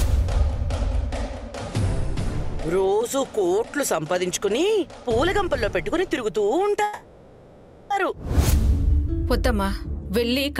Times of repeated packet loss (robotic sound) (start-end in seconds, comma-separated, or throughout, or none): none